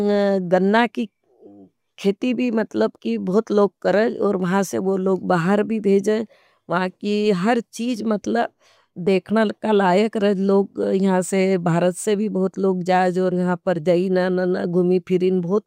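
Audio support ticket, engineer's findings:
No faults found in playback.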